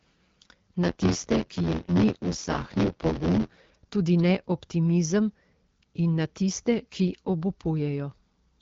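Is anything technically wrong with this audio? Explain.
Yes. From 0.82 s to 3.57 s the speech has a steady robotic buzz at about 86.1 Hz, and that's buffer tearing. The app writing the ring buffer and the hardware reading it have drifted until they cross inside each period, which fits a 512-sample buffer. Roughly a third of every buffer ends up holding audio from around 20 ms earlier, spliced in with hard edges. That gives the rattle riding on the speech, separate from the light AMR wideband (HD Voice) coding texture.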